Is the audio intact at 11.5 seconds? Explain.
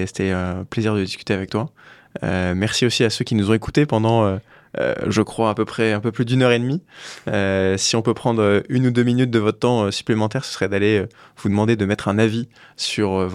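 Yes, at 11.5 seconds the speech plays through cleanly, with no dropout, click, distortion or other fault to be heard at that moment.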